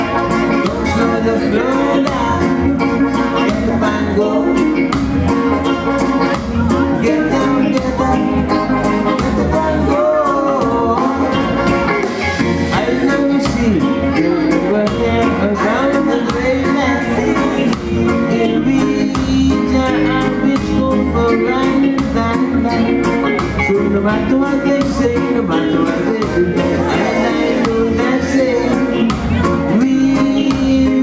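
Gain pumping runs through the whole clip: the gain swings by around 5 dB, squashing loud and soft parts together. The likely cause is microphone gain set far too high, with a fast limiter repeatedly pulling it back down. The call's microphone processing trims the lowest bass and leaves nothing above 8 kHz.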